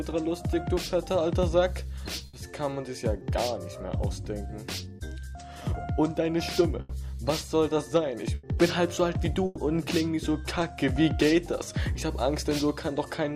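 Four bursts of packet loss, at 2.27, 6.81, 8.35 and 9.45 s, each replace 60 to 120 ms of audio with the preceding sound stretched and fading, then skip ahead. Unlike a plain dropout, the gap is never silent, and no sound is delayed.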